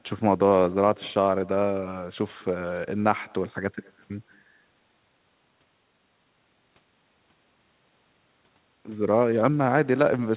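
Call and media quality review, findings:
Echo with no canceller, present throughout the speech. Faint delayed copy trails each phrase by about a fifth of a second, about 28 dB below the direct speech. Far-end loudspeaker audio leaking into far-end mic, no echo cancellation applied. Band-limited to 4 kHz, consistent with G.711 narrowband.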